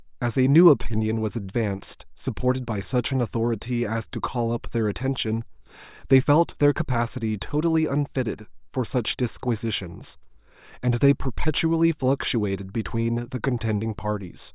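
No technical faults can be heard anywhere in the recording. The speech runs from its first moment to its last with nothing in the signal that calls for comment.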